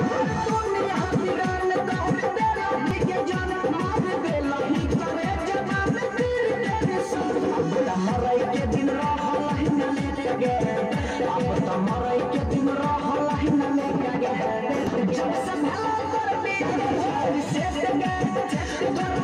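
The sound skips briefly at 2.91, 8.89 and 14.87 s, about six seconds apart. Each time about 20 ms vanishes and the two sides butt together with no gap. This is likely audio missing between chunks, lost as the recorder switches six-second blocks.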